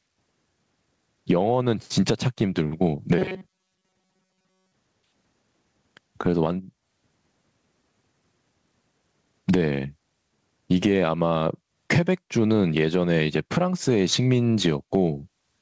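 Gain pumping runs throughout: the gain swings by around 20 dB, pulled down under louder speech, likely from excessive gain hitting a fast limiter.

Robotic sound from repeated short buffers occurs from 3.18 to 4.74 s: speech becomes a rigid 188 Hz metallic buzz, likely from one roughly 5.3 ms buffer being replayed while most real audio is skipped.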